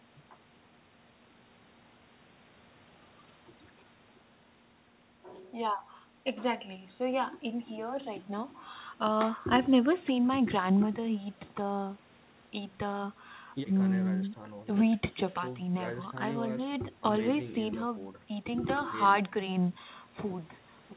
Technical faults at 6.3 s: none

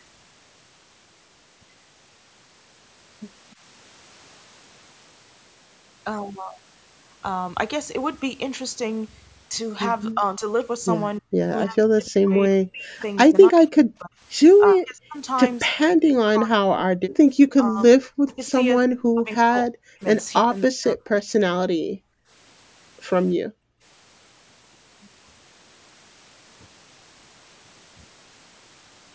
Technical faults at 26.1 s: none

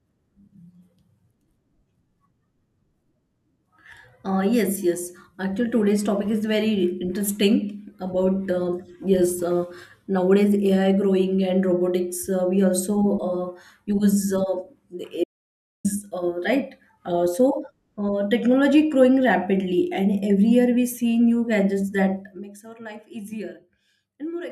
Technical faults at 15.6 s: audio dropout to silence

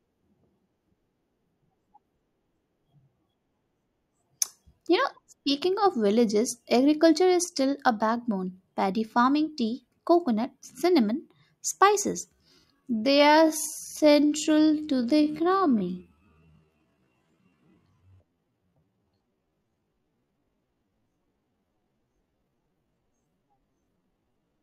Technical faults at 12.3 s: time-stretched section

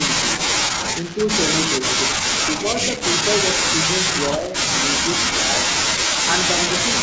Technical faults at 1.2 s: echo leak

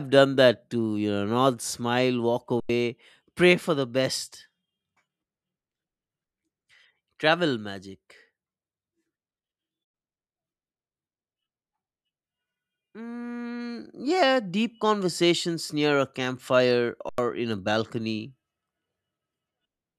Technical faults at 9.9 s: underrun with held sample

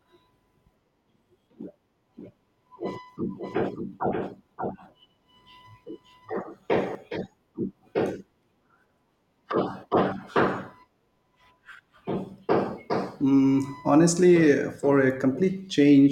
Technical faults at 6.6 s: doubled audio track

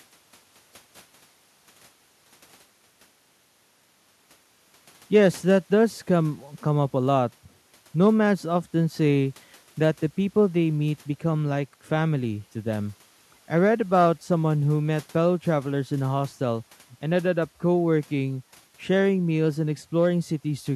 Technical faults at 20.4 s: none

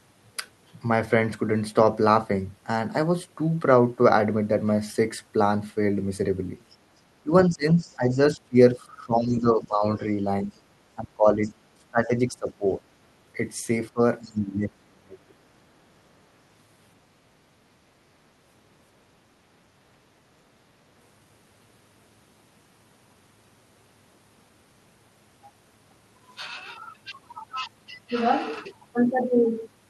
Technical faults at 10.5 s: speech suppressed in double talk; other side's voice leaking through

